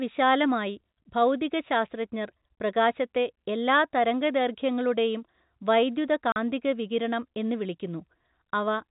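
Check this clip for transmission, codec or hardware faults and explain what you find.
One transmission fault is present: packet loss filled with silence, occurring once in the speech. At 6.32 to 6.36 s, just before "വികിരണം എന്ന്", the audio drops out for 40 ms, which fits two consecutive 20 ms packets going missing. The receiver had nothing to play for that span and inserted digital silence, so the speech is cut by a short gap with abrupt edges. The telephone band limit near 4 kHz comes from the G.711 coding.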